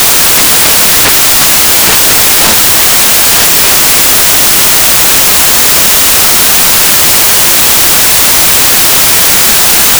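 Samples built from the wrong bytes run through the whole clip, start to finish. Each sample has been assembled from its bytes in the wrong way, whether shifted by one byte, put together in reversed order, or read on the wrong alignment. The rapidly fluctuating low-order bits end up as the dominant part of every value, so the sound comes out as loud, broadband noise, close to white on the louder sounds.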